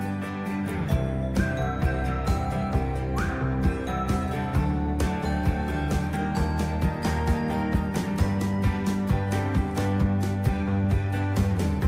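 Nothing goes wrong anywhere in this one; there's no glitch, dropout or distortion to point to at any moment, so there's nothing to flag.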